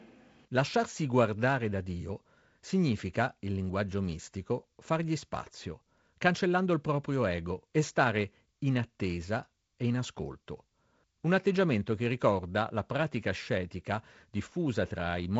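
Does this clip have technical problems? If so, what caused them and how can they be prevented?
No, this clip has no technical problems, so nothing caused any and there is nothing to prevent.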